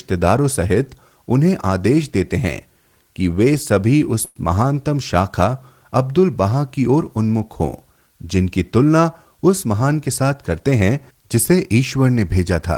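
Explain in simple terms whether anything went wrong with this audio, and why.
Two things went wrong. At about 4.25 s there is a call audio freeze lasting about 0.12 s. The sound stalls, and the last bit is stretched into a brief buzz or hiss. Then the speech carries on where it stopped. Nothing is lost, but everything after arrives a tenth of a second later. The likely cause is delayed network packets leaving the receiver's holding buffer empty.

From 9.53 s to 10.61 s there is a jitter buffer speed-up. The speech runs at about 108% speed, so it sounds hurried, but the pitch stays the same. The receiver was holding too much audio. To catch up, it cut out many tiny slices, about a tenth of a second in total.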